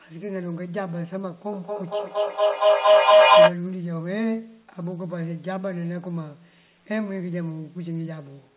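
From 1.53 to 3.61 s, a feedback howl builds. Two devices share one room on the call, so each loop trip adds level. The repeats narrow to a tone near 700 Hz, repeating about every 200 ms. It peaks about 16 dB above the speech.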